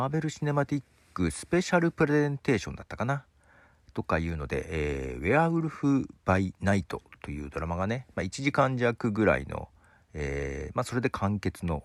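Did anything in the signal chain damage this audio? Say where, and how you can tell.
Yes, lost LE Audio frames on the Bluetooth link. At 5.73 s there's a brief rough smear lasting about 10 ms, which fits one LC3 frame going missing. The decoder filled the gap by reusing the previous spectrum with scrambled signs, so the speech turns noisy there.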